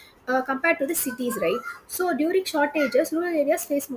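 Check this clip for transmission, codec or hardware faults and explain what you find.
One fault runs through the whole clip. Aliasing is present from start to finish: the audio was resampled downward without an anti-aliasing filter, so content above the fold point at 16 kHz mirrored back down into the audible band at unrelated frequencies. This fits a drop from 44.1 kHz to a 32 kHz rate. The folded energy sits roughly 20 dB below the speech, enough to give sibilants a gritty, metallic edge, with the spectrum running hard up to 16 kHz.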